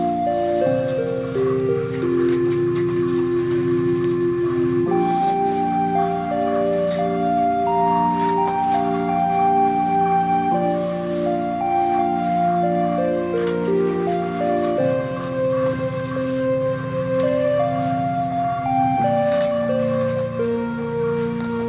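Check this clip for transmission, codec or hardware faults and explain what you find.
Nothing in this clip points to any fault.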